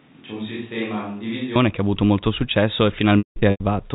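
From the start until 1.55 s, the speech sounds roomy and hollow, with thin bass. It is roughly 10 dB quieter, with room noise about 30 dB below it. This is likely a switch to a distant microphone. The change back at 1.55 s is abrupt.

From 3.18 to 3.6 s comes packet loss with pitch repetition. About 300 ms of audio is missing, scattered across 420 ms. The short gaps sound like brief buzzy held tones. The longest, 180 ms, fades into silence before the speech cross-fades back. The band stops at 4 kHz, as the G.711 telephone coding requires.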